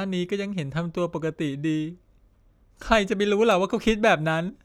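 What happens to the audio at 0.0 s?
Nothing goes wrong at 0.0 s; the speech starts cleanly, with no audible fault at that point.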